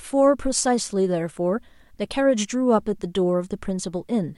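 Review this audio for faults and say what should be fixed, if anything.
No faults turn up in this audio, so nothing needs to be fixed.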